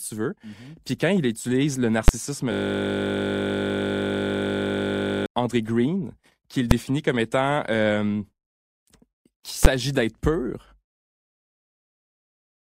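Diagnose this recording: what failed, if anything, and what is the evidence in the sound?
The speech is interrupted by three sharp bangs at 2.08 s, 6.71 s and 9.65 s, each one a block held flat at one extreme value. This is invalid numbers at full scale, a fault in the processing or sample-format conversion stage: a calculation produced infinite or invalid values, which were clamped to the largest sample value. The bangs at 2.08 s and 9.65 s last about 11 ms, which fits a 512-sample block, and the one at 6.71 s about 3 ms, which fits a 128-sample block. On a waveform each is a flat rectangle far beyond the speech peaks. On a spectrogram it is a thin vertical stripe across all frequencies.

Two stretches sound like a steady 50 Hz buzz instead of speech: 2.52 to 5.26 s, and 10.88 s to the end of the clip. This is a system hang loop in the driver or buffer stage. The computer or driver froze while the audio hardware kept replaying the same 20 ms slice of its ring buffer. 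Roughly 3 seconds of speech are lost in the first stretch and roughly 2 seconds in the second. The waveform shows one short segment repeated exactly, over and over. The spectrogram shows evenly spaced harmonic lines at multiples of 50 Hz that do not change.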